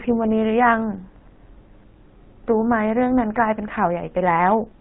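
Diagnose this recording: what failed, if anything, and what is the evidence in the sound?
The fault is at the codec stage: GSM full-rate coding, plainly audible across the whole recording. The speech has a buzzy, gravelly roughness from start to finish. Nothing comes through above 4 kHz, so the sound is dull and narrow. The coder models the vocal tract as a filter. It then drives that filter with a coarse pulse excitation, keeping only every third sample. That thin excitation causes the grit. The damage fits a 13 kbps GSM full-rate coder.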